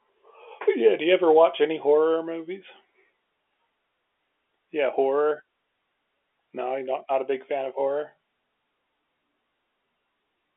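A speech recording with no technical faults to report. It has the narrow, band-limited sound of G.711 telephone coding, with the sound confined to roughly 300 Hz to 3.5 kHz as on an ordinary fixed phone line.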